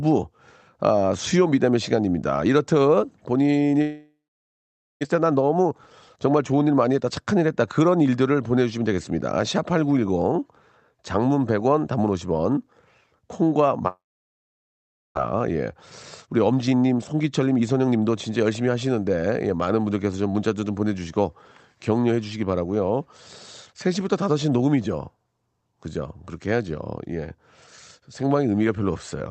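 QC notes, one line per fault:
3.81–5.07 s and 13.88–15.19 s, long network dropout: the sound smears into a fading buzz, then goes silent for about 0.86 s and 1.17 s before resuming with about 1 s missing each time. Likely a packet gap that the receiver padded out before giving up.
5.15–6.99 s and 16.45–18.02 s, jitter buffer speed-up: delivery sounds hurried at unchanged pitch, about 10% and then 15% fast. After each gap the buffer held too much audio, so the receiver trimmed pitch-period slices, roughly 0.2 s in total per stretch.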